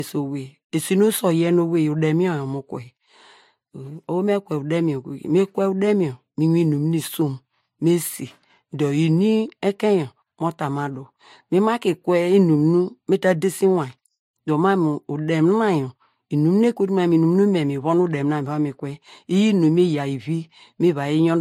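Transcoding between lossy codecs runs throughout. Layered smearing artefacts and nothing above 16.3 kHz are likely from MP3 near 56 kbit/s re-encoded to Vorbis near 54 kbit/s.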